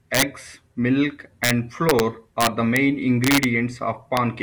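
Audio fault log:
0.15–0.22, 1.44–1.51, 1.89–2.00, 2.41–2.77, 3.24–3.44 and 4.17 s: integer overflow. Loud speech peaks exceed the integer limit and wrap to the opposite sign. Each wrap gives a violent crack, harsher than clipping. The first is overdriven about 6 dB and the rest about 1 to 3 dB.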